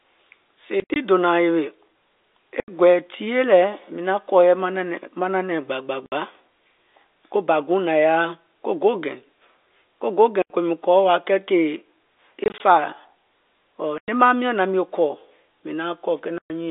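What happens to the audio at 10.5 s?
The speech drops into a hard-edged hole of silence from 10.42 to 10.50 s, about 80 ms. This is packet loss filled with silence: lost packets were replaced by silence, and the gap fits four 20 ms packets.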